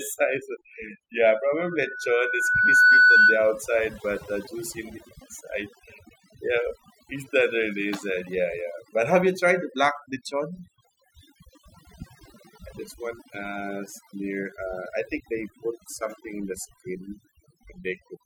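From the very start and all the way through, a noise reduction stage is set far too aggressively. It treats any frequency band that sits close to its noise estimate as noise and pulls it down hard or removes it, so the quiet detail of the speech is stripped away with the noise. The result is overdone noise removal: pauses fall to an unnatural near-silence flecked with twinkling specks.

From 1.58 s to 3.52 s, the microphone is picking up the loudspeaker it feeds, and around 1.5 kHz the loop gain climbs above one, so that frequency keeps reinforcing itself. This loudspeaker feedback squeal swells over roughly a second and a half into a steady tone standing about 15 dB above the speech. It stops just before "but uh juicy in".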